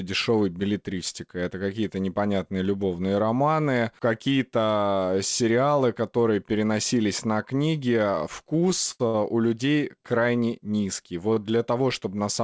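Four short stalls from a late packet occur in this speech: at 8.60–8.64 s, 8.92–9.02 s, 9.08–9.16 s and 11.34–11.38 s. Each time the jitter buffer ran dry, so the receiver held the last sound for 18, 79, 62 and 27 ms, then resumed where it left off with nothing lost. The result is a briefly frozen, faintly buzzy sustain. On a spectrogram, already bare above 8 kHz from the G.722 call path, these appear as flat, smeared horizontal streaks. In the waveform they show as repeated, unchanging cycles.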